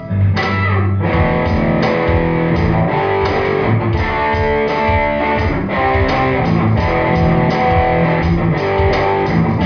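The signal holds steady across the whole clip, with no dropouts, glitches or level disturbances to be heard at any point.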